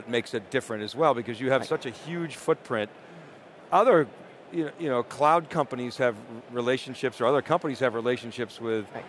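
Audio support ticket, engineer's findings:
Nothing stood out on listening; no fault found to attribute to any component.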